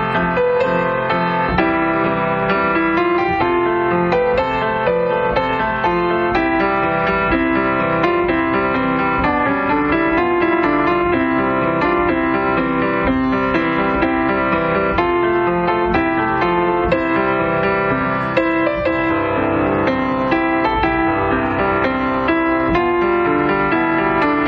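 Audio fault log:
Nothing stood out on listening.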